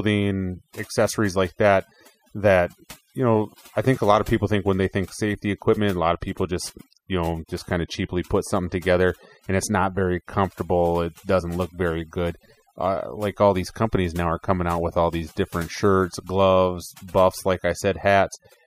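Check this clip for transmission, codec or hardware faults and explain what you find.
Overdone noise removal runs throughout: aggressive spectral gating strips bands near the noise floor, leaving near-silent gaps with twinkling specks and taking quiet parts of the voice with them.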